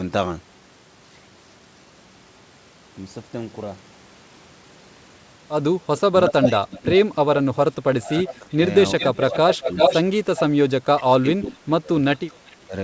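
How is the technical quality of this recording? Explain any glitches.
The speech has clear call-path faults, heard as echo and dropouts in the second half. The sound stops at 8 kHz, consistent with a wideband call codec such as G.722.

Echo leak occurs from 5.97 to 6.89 s, 8.28 to 8.38 s, 8.99 to 10.4 s and 11.7 to 12.56 s. A delayed copy of the speech returns 372 to 397 ms late. The first and third copies are as loud as the speech. The second is about 15 dB lower and the last is faint. The likely cause is a loudspeaker whose echo canceller let pickup through.

Speech suppressed in double talk occurs from 6.1 to 9.77 s, 10.63 to 11.89 s and 12.65 to 12.74 s. The speech dips in pieces, about 20, 30 and 10 dB at its deepest. This likely happened because the echo canceller could not separate its own talker from the loudspeaker echo, so it turned both down.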